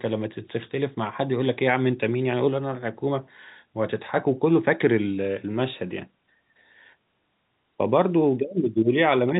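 Nothing stood out on listening to this telephone-band speech recording.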